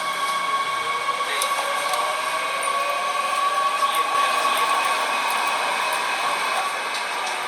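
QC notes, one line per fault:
4.15–6.61 s, doubled audio track: a full-band copy at roughly equal level trails about 0.7 s behind, likely from a second, slower capture path. Waveform shows repeated shapes abruptly starting and stopping.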